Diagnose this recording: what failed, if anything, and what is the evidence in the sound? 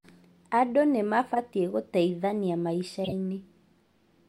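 The codec played corrupt frames decoded from damaged data, misplacing spectral energy. This gave error bursts peaking at about -20 dBFS at 1.34–1.39 s and 3.04–3.12 s.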